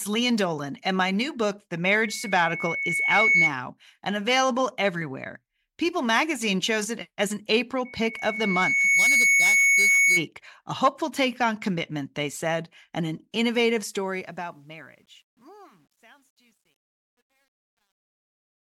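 Speech with two bursts of loudspeaker feedback squeal, at 1.83 to 3.53 s and 7.85 to 10.27 s. Each is a single 2.2 kHz tone that swells, over roughly 1.5 s and 1 s respectively, until it sits around 5 dB above the speech. The microphone is hearing its own loudspeaker, and the loop gain at that frequency has risen past one. The steady growth from nothing is what separates it from an interference whistle, which holds a constant level. The closing fade-out, from about 13.7 s to 18.7 s, dips smoothly in level, but from 13.73 s it carries truncation distortion. The fading sound turns grainy, and it is at its worst from 14.98 s to the end. That fits a fade computed with only 10 bits and no dither. Codec artefacts or a noise gate would not behave this way, because here the grit worsens steadily as the level falls.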